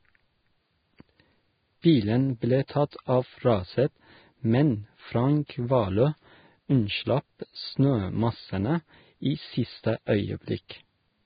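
From start to finish the speech sits in a dull, narrow band with nothing above about 4.9 kHz, and the top end that is left sounds hissy and grainy rather than detailed. That's likely heavy Vorbis compression: at a very low rate, which fits something around 16 kbps, the encoder drops the cut-off and quantises the treble so coarsely that the fine detail turns into noise of roughly the same energy.

Then there's pre-echo, at 1.82 to 1.84 s, 2.68 s, 2.91 to 2.93 s and 10.69 s. Each time a short smear of hiss, around 16 to 21 ms long, runs just ahead of a sharp attack. The codec spreads its quantisation noise across the whole transform block, so when the attack lands late in a block, noise sized for the loud part leaks into the quiet moment before it and blunts the onset.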